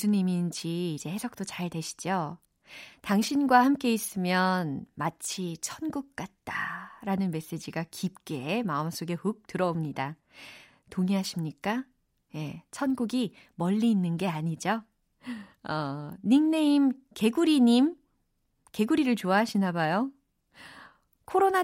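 No technical faults can be heard anywhere in the recording; the speech signal stays continuous and steady throughout.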